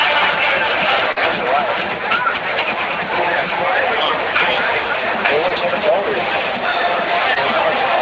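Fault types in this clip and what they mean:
Short concealed packet loss: three tiny gaps, one of 40 ms and two of 20 ms, where the decoder carried the previous sound forward, leaving brief smears.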